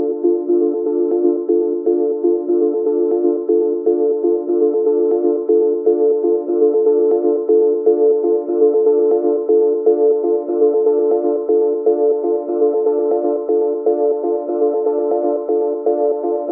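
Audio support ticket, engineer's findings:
Listened in full and found nothing that stood out in the audio.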